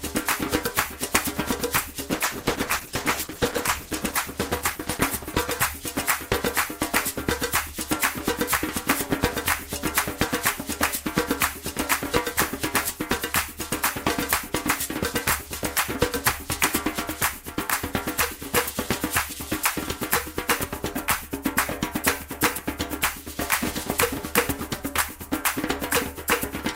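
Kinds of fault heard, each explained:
Call bitrate drop: the call's bandwidth estimate sagged, so the encoder got squeezed from 64 down to 11 kbps between 2.1 and 7.85 s. The sound goes coarse and dull as the top end gets cut off, worst for about 1.7 s, before it recovers.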